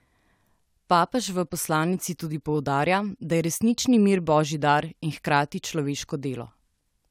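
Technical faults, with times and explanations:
No audible technical faults.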